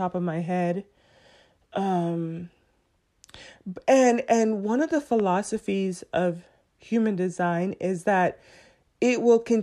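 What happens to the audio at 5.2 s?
A single loud pop lands at about 5.20 to 5.22 s, just after "and one of the", sitting a few decibels above the speech while the speech continues underneath. It sounds like a sharp click-thump. The likely cause is a brief voltage step or pulse, from a plug, switch, static discharge or driver glitch, that was added to the signal and shaped by the circuitry after it. On a waveform it shows as one narrow spike standing above the surrounding speech envelope. On a spectrogram it appears as a thin vertical stripe running across the whole frequency range.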